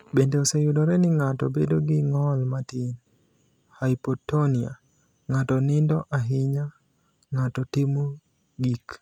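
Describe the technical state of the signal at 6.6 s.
At 6.6 s the signal is intact, with no audible fault at that moment.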